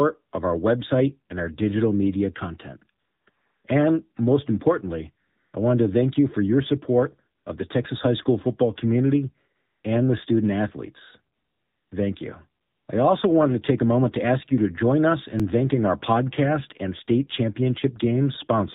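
From the start, everything's coming through the AMR narrowband mobile codec, at what sounds like a low 7.4 kbps mode. With 8 kHz sampling, nothing above 4 kHz makes it through, so the speech is muffled and boxy. At that bit budget, the handful of pulses driving the vocal-tract model can't carry much detail, and the damage is plainly audible: the voice turns buzzy and synthetic.

In the pauses you get AMR comfort noise, at 3.00 to 3.26 s, 3.30 to 3.64 s, 5.28 to 5.54 s, 7.38 to 7.46 s, 9.56 to 9.84 s, 11.36 to 11.92 s and 12.62 to 12.88 s. Each time the phone decided nobody was talking and stopped sending speech frames, so the far end filled the gap with synthetic noise built from a rough sketch of the background. The real ambience gets swapped for a smooth, steady hiss that switches in and out, anywhere from 80 ms to 560 ms at a stretch.

At 15.40 s there's a jump in the sound. That's most likely a dropped buffer (overrun), where the samples weren't collected before the hardware overwrote them. 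Only a few milliseconds go missing, and the two sides are butted together with no silence between them, so the audio just skips ahead slightly.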